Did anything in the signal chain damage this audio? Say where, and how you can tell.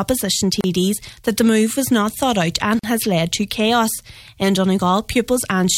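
Yes. At the codec stage there is a gap at a join of encoded pieces: silences of 33 ms at 0.61–0.64 s and 43 ms at 2.79–2.84 s, edges smeared. Untrimmed encoder delay and last-frame padding remain. Unlike a dropout, the sound resumes exactly where it stopped.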